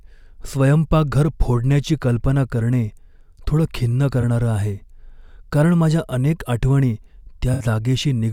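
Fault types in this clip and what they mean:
AAC frame loss with concealment: Coded frames went missing, and the decoder filled each gap from the last good spectrum. After "थोडं खिन्न" at 4.21 s, a 21 ms patch fits one lost frame. After "कारण माझ्या अनेक आठवणी" at 7.53 s, a 64 ms patch fits three.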